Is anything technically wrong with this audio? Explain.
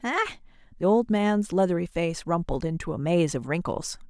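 No, nothing is technically wrong with this audio.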